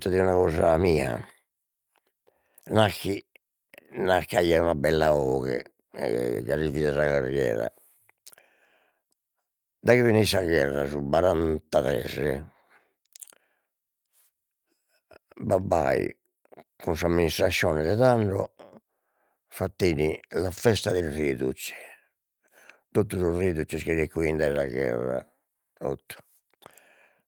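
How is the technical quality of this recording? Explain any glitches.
The recording has a steady timing problem across the whole speech clip. A clock mismatch between the two ends forces continual corrections, heard as small, irregular hiccups.

Clock drift between sender and receiver runs throughout. The sending end's audio clock is running roughly 4 percent fast relative to the receiver's, so audio arrives slightly quicker than it is played out. The jitter buffer keeps filling toward its limit. The receiver must keep shedding material to hold latency steady, and the timing never settles at any point in the clip.

Repeated timing corrections follow directly from that drift, from about 0.07 s to 27.23 s. To keep pace with a sender effectively running at 104 percent speed, the receiver repeatedly cuts short slices out of the stream. Every edit goes the same way, removing audio, but the spacing is uneven. 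Each cut is small, so the result is faint skips and a slightly unsteady tempo rather than obvious dropouts.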